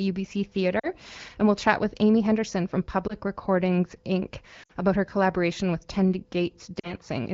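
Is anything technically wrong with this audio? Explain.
Yes. Lost AMR speech frames occur at 0.79–0.88 s (just before "and we'll chat with"), 3.08–3.15 s, 4.63–4.72 s (just before "about her collaboration with") and 6.80–6.93 s. Radio errors corrupted frames, so the decoder repeated the last good pitch and vocal-tract settings at falling gain. The gaps hold about 20 to 60 ms of missing speech. The single lost frame at 3.08 s sounds like a brief dip or warble. The other runs of two or three frames drop to near silence within two frames. After each one the voice returns weak or rough for a moment. This happens over the AMR wideband codec's light, clear coding.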